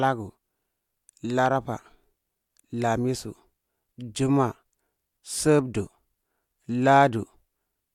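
Nothing in this recording trips any alarm; the speech just runs along with no dropouts, glitches or other technical trouble turning up anywhere along the way.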